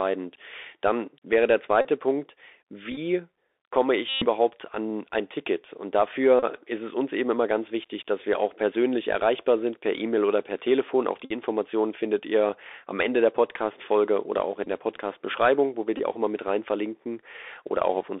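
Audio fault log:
throughout: Bluetooth CVSD headset codec. The speech sits in a narrow band from about 300 Hz to 3.6 kHz, consistent with a 64 kbps CVSD link. One-bit adaptive-step coding leaves audible granular hiss, scratchy s sounds and slope distortion on loud, bright passages.
1.81–1.88, 2.91–2.98, 4.09–4.26, 6.39–6.44, 11.25–11.32, 14.64–14.68, 15.98–16.00 s: Bluetooth headset packet repeated. Lost packets were replaced by re-decoding the previous one every 3.75 ms, giving a buzz near 267 Hz. This is longest at 4.09 s, about 128 ms, and is broken into short bursts at 2.91 s.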